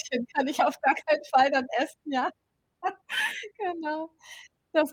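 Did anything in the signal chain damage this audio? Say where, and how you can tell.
No, nothing in the chain audibly damaged this speech recording at any stage.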